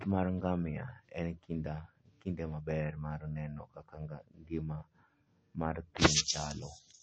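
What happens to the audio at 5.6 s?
At 5.6 s, as throughout, a starved encoder has likely applied MP3 compression, cutting everything above 8.3 kHz, so the speech sounds dull and watery, which fits about 35 kbps.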